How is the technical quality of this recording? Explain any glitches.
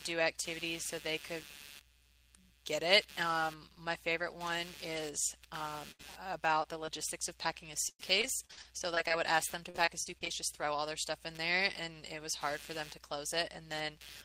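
The recording has an ongoing computer activity noise underneath and a cluster of packet-loss glitches between 5.9 and 10.3 s.

Computer activity noise runs throughout: a buzz pulsing at around 150 Hz, roughly 20 dB below the speech, from changing computer load modulating the audio ground.

A burst of packet loss at 5.91 to 6.01 s: about 80 ms went missing, and the receiver held and faded the last sound before jumping ahead.

Short concealed packet loss at 6.63 and 6.86 s: roughly 20 ms each was patched by extending the preceding audio, producing brief smears or wobbles.

Repeated packet loss (robotic sound) at 7.89 to 9.12 s, with ten gaps up to 97 ms, and at 9.70 to 10.28 s, with five gaps up to 37 ms. Constant patching makes the speech choppy, with pieces missing.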